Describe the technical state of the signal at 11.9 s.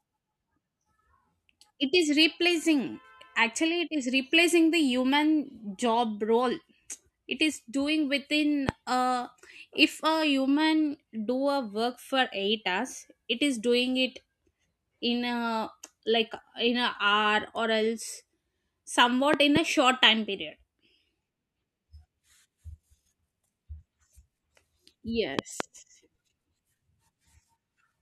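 At 11.9 s the speech signal is intact, with no audible fault at that moment.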